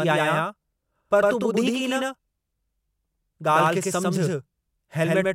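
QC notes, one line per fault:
Throughout: doubled audio track. The speech is heard twice, with a full-band copy trailing about a tenth of a second behind at roughly equal level. It has no decay or room colour, giving a hard slapback. Likely cause: a slower second capture path.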